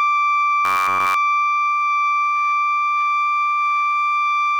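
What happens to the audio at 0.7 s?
The music collapses into a rigid, metallic buzz at about 94 Hz from 0.65 to 1.14 s: robotic sound from repeated short buffers, likely from one roughly 11 ms chunk looping while the real audio is skipped.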